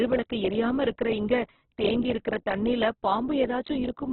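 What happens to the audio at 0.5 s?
At 0.5 s, as throughout the speech, the signal has likely passed through heavy Opus compression at a starved bitrate near 8 kbps. The encoder fills bands it cannot afford with folded or noise content, so the sound turns rough and grainy, with nothing above 4.1 kHz.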